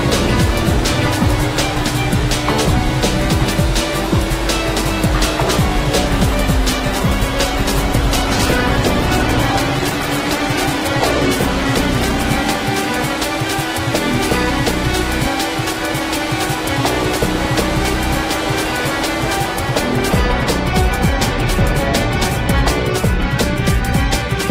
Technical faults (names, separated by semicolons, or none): call bitrate drop